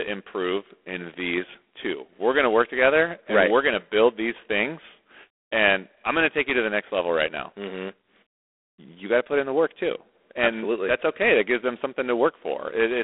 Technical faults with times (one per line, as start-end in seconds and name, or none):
0.00-13.03 G.726 ADPCM